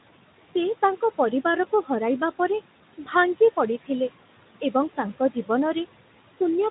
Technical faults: noise suppressor artifacts

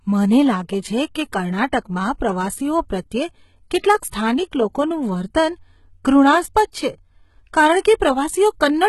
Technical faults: HE-AAC compression; pre-echo

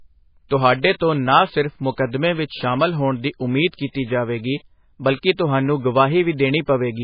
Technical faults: MP3 compression

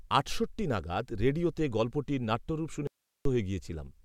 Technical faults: audio dropout to a faint residue

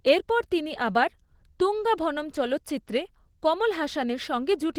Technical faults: Opus voice compression

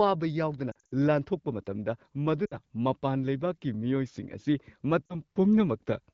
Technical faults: lost AMR speech frames

